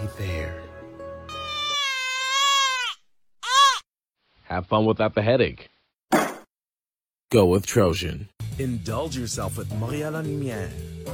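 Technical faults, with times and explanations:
4.15 to 5.95 s, digital radio blending to analogue: the receiver loses the digital stream and cross-fades over about 231 ms to the station's AM broadcast, then returns to digital at 5.95 s. During the analogue stretch the top end turns dull and muffled, which is typical of AM's narrow audio bandwidth. Hiss rises to roughly 35 dB below the programme, while overall level stays matched across both blends.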